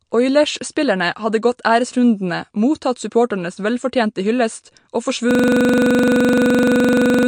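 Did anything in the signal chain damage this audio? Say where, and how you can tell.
Yes. The whole clip sounds dull and watery, with nothing above about 9.8 kHz, which points to a low bitrate. At the codec stage this is likely MP3 compression cutting the treble and dropping weak detail.

From 5.31 s to the end, the sound collapses into a rapid repetition at 23.4 Hz. A 42.67 ms piece repeats exactly, which fits a 2048-sample buffer. This is a system hang loop at the driver or buffer stage: the hardware kept replaying its ring buffer after the system froze.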